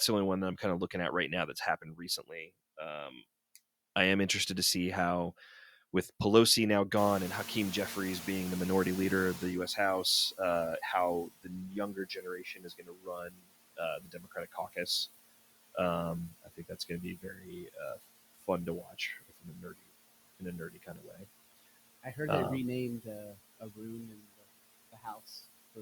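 Noise suppressor artifacts run through the whole clip: the suppressor pulls the background down by about 19 dB, so the noise dips between phrases and swells back under them. On a spectrogram the noise floor looks blotchy and gated frame by frame rather than smooth, and the waveform shows the floor dropping away in each pause.

Speech cut by the noise suppressor first appears from 1.28 to 2.5 s. About 0.4 s of soft speech energy is treated as noise and pushed down by as much as about 18 dB, so it sounds swallowed or faint. On the spectrogram, weak speech energy is carved out along with the background, and the waveform shows the envelope collapsing early.

At about 7 s the room noise jumps by about 20 dB. The noise suppressor catching up follows from 6.96 to 11.19 s: its noise estimate lags, so the louder noise first passes with less reduction, then sinks over 4230 ms as the estimate adapts, ending with about 15 dB of cut. 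A spectrogram shows a bright band of broadband noise that fades gradually, and the waveform floor thickens, then slowly narrows.

Speech is cut again from 11.26 to 14.88 s, with about two seconds affected and drops of up to about 22 dB. Further cuts follow at 16.43 to 18.48 s (up to about 19 dB), 18.83 to 19.91 s (about 21 dB), 20.4 to 21.26 s (about 16 dB), 22.03 to 22.18 s (about 15 dB), 23.02 to 24.46 s (about 22 dB) and 24.92 to 25.44 s (about 17 dB). Each shows the same thinned, faint stretches and missing low-level detail.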